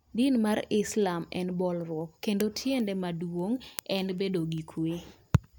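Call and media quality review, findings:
Word clock ticks, 0.23–5.57 s: sharp clicks roughly every 0.2 s. Unlocked digital input clock, around 100 ppm off, slipping single samples. Spectrogram: evenly spaced thin vertical broadband lines.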